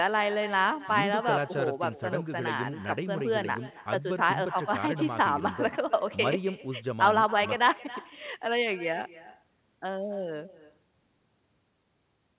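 Throughout the speech there is echo with no canceller. The far end's loudspeaker feeds its microphone, and nothing removes it. Every phrase returns about a third of a second later, about 18 dB quieter, thin, inside a band that stops at 4 kHz.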